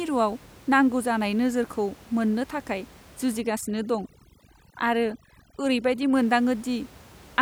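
Overdone noise removal from 3.41 to 6.15 s, just after "जानाय नोजोरखौ मोननो थाखाय", affects this speech clip. An overly aggressive reducer suppresses each frequency band it judges close to its noise estimate, taking quiet speech detail with it, so the room noise (about 25 dB below speech) drops and breaks up into twinkling specks.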